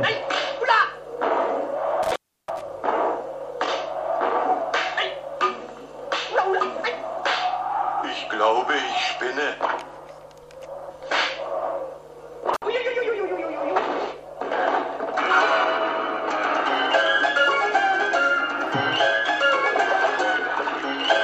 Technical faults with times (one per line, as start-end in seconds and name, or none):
2.03-2.61 intermittent contact
12.54-12.64 intermittent contact